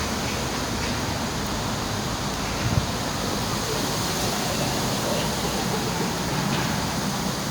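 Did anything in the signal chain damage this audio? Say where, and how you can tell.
No, nothing in the signal chain has audibly damaged this recording. No stage between capture and playback leaves a trace that can be heard in the sound.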